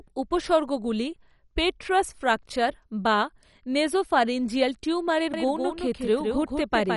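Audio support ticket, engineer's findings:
Dull, gurgling speech with granular distortion, whole clip; no content above 11.3 kHz. Likely MP2 compression at a low rate, around 48 kbps: too few bits, so upper sub-bands switch off and remaining bands are coarsely quantised, flickering.

Doubled audio track from 5.34 s to end, starting abruptly after "ফ্র্যাকচার বা নেসোফ্যারিঞ্জিয়াল টিউমারের". Full-band copy trails by roughly 150 ms, a few dB quieter, with no decay or room colour. Likely a second, slower capture path or an edit leaving two out-of-step copies mixed.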